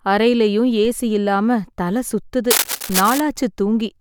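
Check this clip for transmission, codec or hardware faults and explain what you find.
Two kinds of hardware fault are present in the speech: a pair of DC steps and a stretch of cable scratch noise.

The DC steps fall at 0.85 s and again at 2.9 s. At each, the waveform's zero line jumps by about -24 dBFS, as happens when an offset input is switched in or a converter recalibrates. The offset then drains away through a high-pass around 5 Hz. Each step is heard as a single low thump while the speech continues unaltered. Unlike a click from a dropout, nothing is missing from the signal. The baseline simply shifts and slowly recovers.

From 2.51 to 3.20 s, a dense, irregular rustling scratch sits over the speech, only a little quieter than the speech itself. It is likely cable scratch noise, from a worn lead, connector or control being moved so that its contact resistance fluctuates rapidly. 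It differs from steady hiss or hum because it comes in uneven, gritty bursts over less than a second. The second DC thump at 2.9 s lands inside this stretch.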